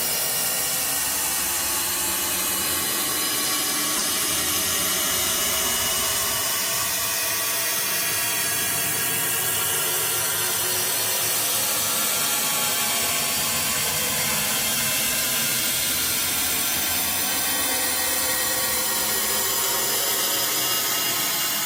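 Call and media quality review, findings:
Short chirp/noise bursts at 3.97–4.04 s, 7.01–7.06 s and 19.71–19.78 s, each a few tens of ms. Corrupt frame decoded: bit errors in two or three compressed frames per event were decoded without concealment, misread gains and codes putting energy at wrong frequencies. Error peaks around -10 dBFS (first and third), roughly -15 dBFS (second). Component: transport/decoder path, missing integrity check before decode.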